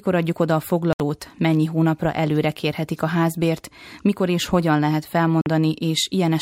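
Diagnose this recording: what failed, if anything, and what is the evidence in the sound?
The speech cuts to dead silence twice: from 0.93 to 1.00 s, about 70 ms, between "adjuk oda a" and "mennyi hónapra előre kérhetik", and from 5.41 to 5.46 s, about 46 ms, right after "mikor és hogyan lehet". The speech resumes further along, as if it had kept playing. This is likely a Bluetooth dropout on the wireless playback link: audio packets arrived too late and were discarded. The gap lengths fit a few lost packets each.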